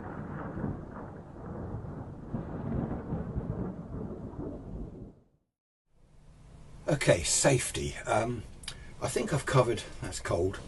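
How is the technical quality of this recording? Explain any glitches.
No glitches turn up anywhere in this recording, which comes through as a continuous, unbroken signal with nothing in it to explain.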